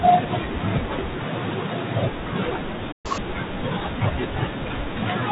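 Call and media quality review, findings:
Playback stall, 2.92–3.06 s: speech cuts to silence mid-flow for about 0.12 s, then resumes. Likely player buffer underrun or blocked audio thread.

Catch-up at higher speed, 3.06–3.18 s: speech jumps to double speed, pitch up around ten semitones. Player resampling its backlog to recover the time lost in the stall.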